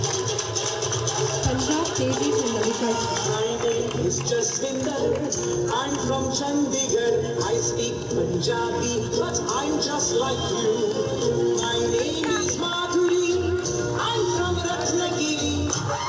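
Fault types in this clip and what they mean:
No faults can be heard anywhere in this clip.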